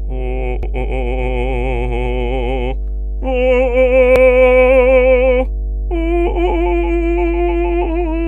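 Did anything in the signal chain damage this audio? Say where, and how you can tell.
Yes. In the analogue wiring, a ground loop or nearby transformer couples in the power line, leaving a steady 50 Hz mains hum throughout, strong and only slightly below the music.

In storage or transmission of the encoded stream, repeated frames replay a 92.9 ms block, which fits a single compressed frame, at 0.63–0.72 s and 4.16–4.25 s. Each repeat causes an audible stutter.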